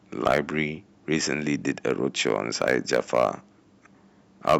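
Hard clipping hits at 0.26–0.39 s, 1.69–1.91 s, 2.27–3.29 s and 4.48–4.56 s, with the speech overdriving a stage by about 10, 2, 8 and 10 dB. The waveform shows flat-topped peaks, the spectrogram vertical smears of high harmonics, heard as harsh crackly fuzz.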